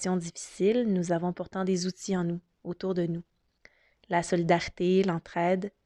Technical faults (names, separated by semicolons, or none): none